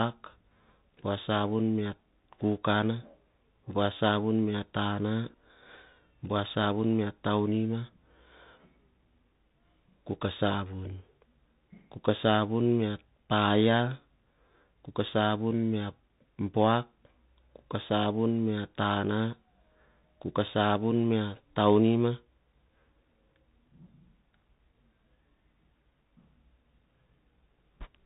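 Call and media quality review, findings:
Muffled, band-limited speech throughout, nothing above 4 kHz; scratchy s sounds, grainy hiss under speech, plainly audible distortion on loud high content. Bluetooth CVSD headset codec, fits a 64 kbps one-bit stream: adaptive up/down steps lag fast waveforms.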